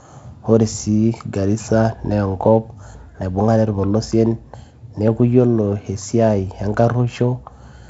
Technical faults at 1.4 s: none

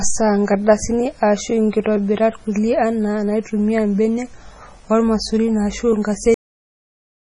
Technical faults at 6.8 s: MP3 compression; cut-off end

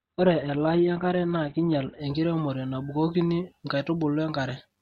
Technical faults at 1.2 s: adaptive stream starting at a low bitrate

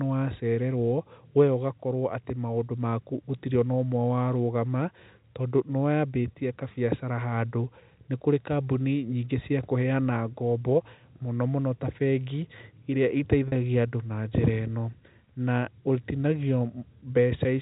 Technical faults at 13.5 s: packet loss with pitch repetition

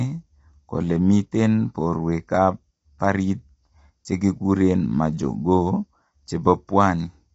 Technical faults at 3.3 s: low-delay AAC compression

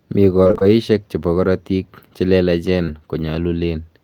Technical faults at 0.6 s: repeated packet loss (robotic sound)

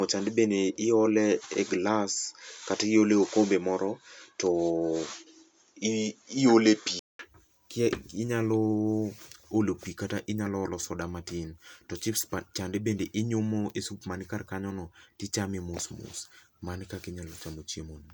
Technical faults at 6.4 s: input switched to a poorer device

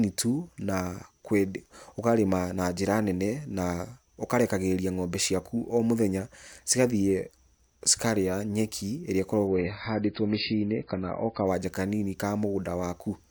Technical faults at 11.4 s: adaptive stream at a lower bitrate

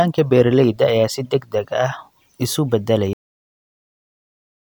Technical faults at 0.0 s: none

